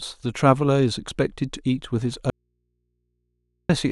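An audio dropout to a faint residue runs from 2.30 to 3.69 s: the speech cuts abruptly for about 1.39 s, leaving only low mains hum far below, likely from an open input.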